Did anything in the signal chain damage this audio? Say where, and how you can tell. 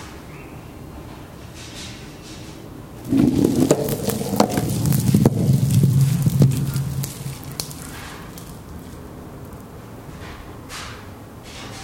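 No, nothing in the chain damaged this audio.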